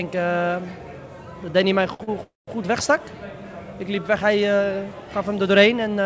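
At 1.94 s and again at 2.04 s there are two short stalls from late packets. In each, a packet missed its playout time and the jitter buffer ran dry, so the receiver held the last sound in place: about 57 ms the first time and 36 ms the second. That is audible as a brief smeared hold with a faint buzz or dip. Playback then resumes where it left off, so nothing is lost, but the delay grows by those amounts.

From 2.23 to 2.49 s comes a call audio freeze, likely from packets held up in transit long enough to empty the jitter buffer. The receiver extends the last sound as a fading buzz or hiss, and roughly 180 ms of the 242 ms filled span decays into silence before the audio picks up again at the point where it stopped. This inserts a gap without dropping content. Throughout, the band ends at 8 kHz, consistent with G.722 on the call path.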